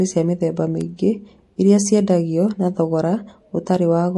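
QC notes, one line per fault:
Throughout: MP3 compression, likely the cause of the watery, swirly texture. Nothing above 11.3 kHz, and the metallic sibilants fit a starved bitrate near 48 kbps.
0.81 s and 2.49 s: bit error spike, a single sharp broadband tick just after "cia mĩthemba" and just before "na thogora". One corrupted sample jumps and snaps back.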